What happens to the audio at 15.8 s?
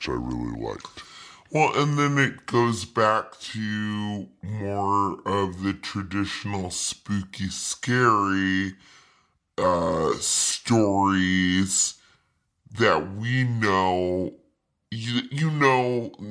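At 15.8 s, as throughout, a wrong sample rate slows the speech to 0.69 times speed and drops its pitch by 6.45 semitones, which fits 32 kHz audio played at 22 kHz. Spectrogram harmonics sit lower and stretch out in time.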